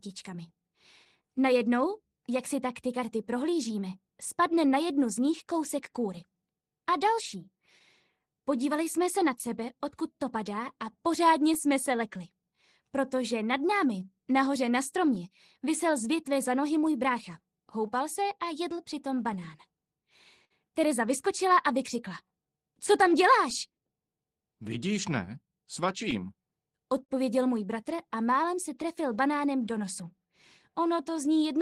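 A faint, uneven lag runs through the whole clip, the tempo never quite settling. This is clock drift between sender and receiver: the sender's clock runs roughly 4 percent slow, so the receiver's jitter buffer keeps draining and must be topped up.

From 0.08 s to 31.59 s the sound drags slightly and unsteadily, with small hiccups at irregular spacing. These repeated timing corrections are the receiver repeating short pieces to keep pace, playing at 97 percent speed and adding about a second overall.

Brief ticks and smears appear between 1.05 and 9.49 s, 11.54 and 16.08 s, 17.87 and 20.52 s, and 23.06 and 28.85 s. These scattered short gaps are lost or late packets patched by extending the last sound. Most patches are very short, but the longest is near 50 ms, in the third stretch.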